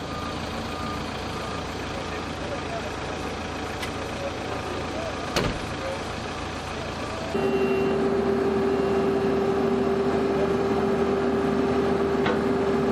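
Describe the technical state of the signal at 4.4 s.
At 4.4 s the signal is intact, with no audible fault at that moment.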